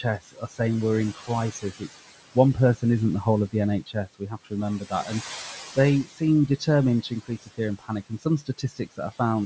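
Throughout the recording, a noise suppressor cuts the bands it treats as steady room noise by about 15 dB. The background sinks between phrases and rises back under them.

The same suppressor also mistakes parts of the speech for noise and turns them down by about 13 to 18 dB. This happens at 0.03–0.6 s just before "we're in", at 1.15–1.9 s right after "we're in", at 2.35–2.83 s, at 3.86–5.12 s following "the whole of the", at 5.75–6.68 s and at 7.02–9.2 s. Soft consonants and word endings sound swallowed or faint, most deeply in the 3.86–5.12 s stretch.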